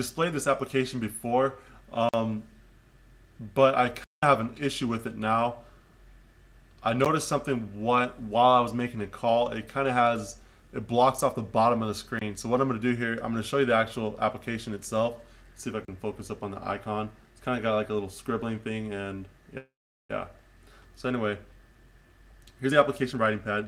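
At 2.09, 4.04, 7.05, 12.19 and 15.85 s the sound drops to blocks of digital silence of 46 ms, 186 ms, 14 ms, 24 ms and 33 ms. The first two fit buffers of 2048 and 8192 samples that were not filled in time and were left as zeros. The 14 ms gap is heard as a tick, the other short gaps as brief holes and the 186 ms one as a clear hole. A waveform shows a flat line. A spectrogram shows a sharp vertical band of nothing.

From 19.57 to 20.11 s there is a call audio freeze. The last sound is stretched into a fading buzz that becomes silent for about 400 ms, and then the audio resumes exactly where it stopped. This 520 ms gap was likely caused by held-up packets emptying the jitter buffer. On a spectrogram it appears as smeared, repeated harmonics that decay into an empty stretch, with no abrupt cut at the start.

From 22.25 to 23.66 s there is a jitter buffer speed-up. The receiver cut out short pitch-period pieces again and again to shed excess delay, removing roughly a fifth of a second in total. 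The sound runs at about 116% speed at unchanged pitch and seems hurried. A spectrogram shows the same harmonic spacing but features compressed in time, and the waveform shows joins where cycles were dropped.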